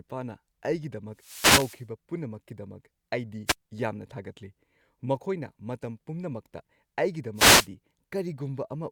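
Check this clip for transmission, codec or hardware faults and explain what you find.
There's one fault here, repeated three times: wireless microphone noise hits at 1.14 to 1.86 s, 3.46 to 3.55 s and 7.35 to 7.68 s. Each is a burst of static over the speech, from the mic's FM radio link fading as reflected signals cancel and receiver noise surges.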